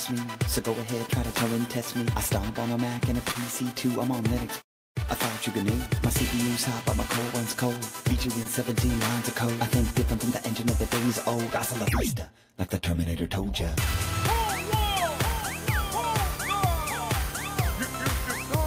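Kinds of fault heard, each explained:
Short stall from a late packet: around 3.31 to 3.37 s the sound hangs for about 34 ms, a held stretch with a slight buzz or dip, then carries on from the same point. A packet arrived late, the jitter buffer ran dry, and the receiver stretched the last sound meanwhile, adding 34 ms of delay.
Short concealed packet loss: near 8.43 to 8.47 s there is a brief smear or wobble where about 20 ms of audio is gone. That piece never reached the decoder in time, so the receiver filled the gap by extending the preceding sound, then blended back.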